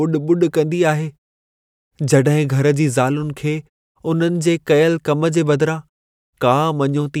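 No technical faults are audible.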